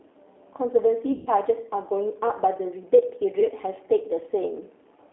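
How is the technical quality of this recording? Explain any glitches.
The recording is degraded throughout by a low-bitrate speech codec, with two dropouts covered by the decoder's own concealment.

G.729 codec: The whole clip passes through a narrow line band from about 300 Hz to 3.5 kHz and sounds slightly rough and synthetic, which fits the 8 kbit/s G.729 codec. That codec rebuilds speech from a vocal-tract filter, a pitch predictor and a few pulses per frame. Unlike plain band-limiting, its damage is a grainy, buzzy texture rather than just muffling.

VoIP packet loss concealed by the speech codec: At 1.12 to 1.29 s about 140 ms of audio is missing, and at 3.40 to 3.46 s about 20 ms. Each time the decoder stretches the last pitch and filter into a fading buzzy tone or coloured noise. Because each frame builds on the previous one, the speech stays weak briefly after packets return, unlike a clean silent gap.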